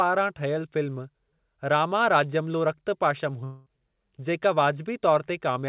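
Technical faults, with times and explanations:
3.44–3.68 s, long network dropout: For about 0.22 s the sound turns into a fading buzz rather than continuing normally. The likely cause is a stretch of audio that never arrived. The receiver filled the whole gap by stretching the last sound it had, so no true silence appears. That fill decays as it goes. The audio then resumes, but the missing 0.22 s is gone for good. The band stays capped at 4 kHz, as the narrowband call codec allows.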